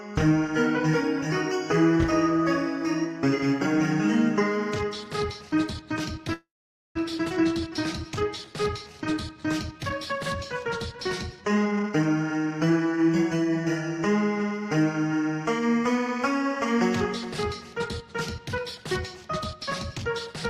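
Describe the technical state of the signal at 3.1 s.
At 3.1 s the signal is intact, with no audible dropout, distortion, noise burst or other technical fault at that moment.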